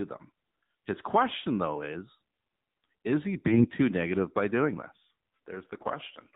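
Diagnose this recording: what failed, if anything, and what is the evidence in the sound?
Codec stage: the AMR narrowband mobile codec is audible throughout, with nothing above 4 kHz and a buzzy, synthetic speech texture that points to a low mode near 7.4 kbps.

Network stage: AMR bit errors at 3.40–3.65 s, between "is he" and "too negative by doing", and again at 5.78–5.93 s. Flipped bits turn the speech hoarse and gargly while pitch and level hold, which sets these apart from a dropout or muted concealment.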